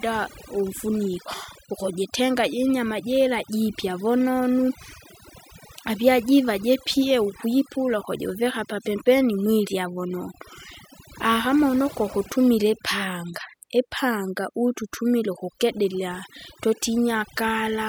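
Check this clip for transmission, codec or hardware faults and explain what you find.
Overdone noise removal runs through the whole clip. A noise reduction stage set far too aggressively pulls down or shuts off any frequency band sitting near its noise estimate, taking quieter parts of the speech along. The background drops and breaks up into twinkling, warbling specks.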